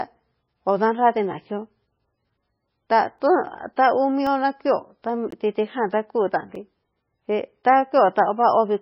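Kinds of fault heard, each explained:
MP3 compression: The speech was likely squeezed through an MP3 encoder at a very low bitrate, somewhere near 17 kbps. Starved of bits, it cut off everything above about 5.5 kHz and dropped weak frequency lines that then flicker in and out between frames. The whole clip sounds dull and muffled, with a watery, swirling texture, metallic chirping on sibilants, and smeared consonant onsets.
Block of digital silence: The playback or processing chain most likely did not deliver samples in time, so stretches of the output were written as silence. Each cut to silence and back is abrupt, with no fade. The clip has four such dropouts: roughly 2 ms ticks at 3.19 s and 4.27 s, a 17 ms hole at 5.31 s, and a 5.8 ms gap at 6.55 s, whose length fits a 256-sample buffer.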